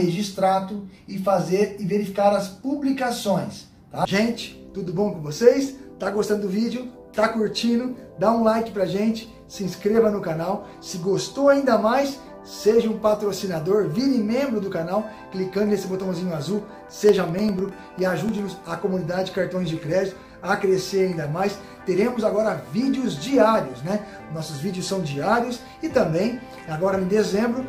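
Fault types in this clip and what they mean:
Periodic USB or driver dropouts: something blocks the audio path at a fixed interval, so from 16.49 to 18.79 s about a millisecond is replaced by silence every 0.1 s, a steady ticking; waveforms show tiny flat gaps, spectrograms evenly spaced thin vertical broadband lines.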